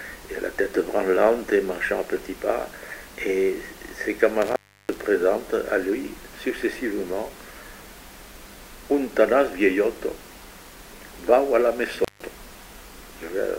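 Intermittent contact at 4.42 to 5.02 s and 12.00 to 12.25 s: a loose connection opens briefly, cutting the sound for about 333 ms, then 159 ms, with crackle at the edges.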